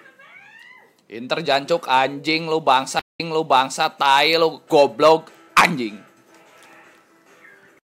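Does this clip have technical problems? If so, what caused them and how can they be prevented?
Yes. At 2.99 s there is a stream reconnect: the connection dropped, the audio goes silent for about 182 ms, and the player restarted its decoder mid-stream. Because the server resent a burst of buffered data, playback resumes about 653 ms earlier than where it stopped, so a short stretch of audio is heard twice through to 3.83 s. Prevention: use a larger client buffer and have the player resume from the exact byte or timestamp offset after reconnecting.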